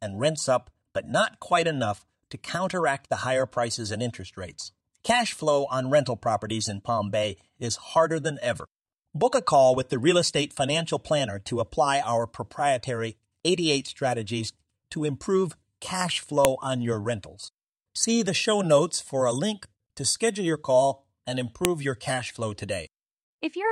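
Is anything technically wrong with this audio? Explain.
Yes. There are two sharp, loud clicks in this speech. The first is at 16.45 s, between "strategies to improve cash" and "on your rentals". The second is at 21.65 s, between "schedule your call and" and "your cash flow". Both are a file header played as audio. A WAV piece was joined on with its header still in place. Those header bytes are read as samples, so each join snaps regardless of the speech around it.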